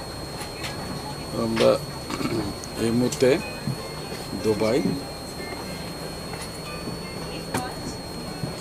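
From start to finish a switching supply whistle sits under the sound, a high tone wandering between about 4.2 and 4.4 kHz at roughly 15 dB below the signal. Unlike a fixed interference tone, its pitch shifts as the supply's switching frequency changes.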